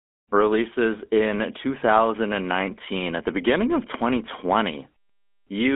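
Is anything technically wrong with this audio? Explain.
Yes. Throughout the speech, voices sound buzzy and gravelly, thin and boxed into roughly 250 Hz to 3.4 kHz. This is GSM full-rate codec damage, consistent with a 13 kbps stream that rebuilds speech from sparse pulse excitation.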